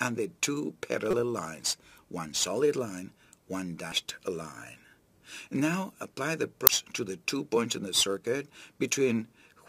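Damaged data in a compressed stream breaks the audio at 1.11 to 1.14 s, then briefly at 3.92 s and 6.67 s. Corrupted bytes make the decoder misread frames and lose sync while it hunts for the next header, producing short chirps or blips.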